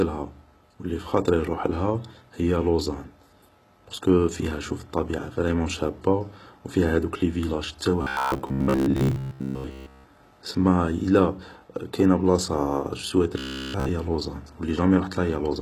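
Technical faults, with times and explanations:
throughout HE-AAC compression: the encoder likely coded only the lower spectrum and rebuilt the treble by copying lower bands upward, which fits a very low bitrate near 16 kbps. The rebuilt treble makes sibilants gritty and metallic.
8.02–10.04 s and 13.38–13.89 s robotic sound from repeated short buffers: new audio likely arrived too seldom, so playback looped 15 ms chunks, forcing a rigid 66.7 Hz buzz. The first, after "فيها هادوك لي فيلاج", is mostly repeats; the second, after "إلا كاينة بلاصة جو", is entirely repeats.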